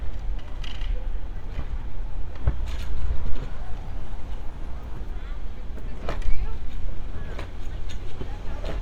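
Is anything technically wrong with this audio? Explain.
No, nothing technically wrong turns up anywhere in this audio, so there is nothing to flag.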